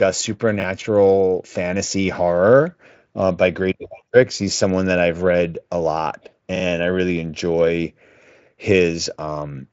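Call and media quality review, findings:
Chunks out of order, 0.6–0.64 s: brief jumbled moment as a 20 ms chunk plays one slot late, likely jitter-buffer or write-order fault. Waveform shows three hard joins, spectrogram vertical lines.

Repeated buffer, 6.56–6.64 s and 8.08–8.16 s: short stutter, the same 40 ms piece replayed twice on underrun, fitting a 40 ms playout buffer. Waveform shows identical repeating segments with step joins. Spectrogram shows vertical click lines.

Speex path: band ends near 7.7 kHz.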